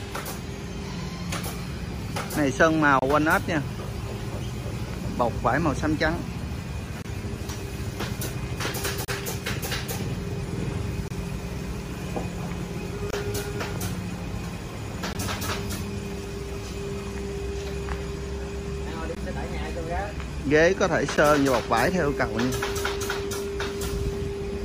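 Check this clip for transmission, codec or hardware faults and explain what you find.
The clip has one fault, repeated eight times.

Gaps between stream segments occur at 2.99–3.02, 7.02–7.05, 9.05–9.08, 11.08–11.11, 13.11–13.13, 15.13, 19.15 and 21.17 s. They fall on 2 s segment boundaries. The time stamps of adjacent segments don't quite meet, so the player pads each mismatch with silence lasting 12 to 33 ms. Each one is a hard-edged dropout that briefly cuts the sound and then resumes it intact, with nothing missing, in a regular two-second rhythm.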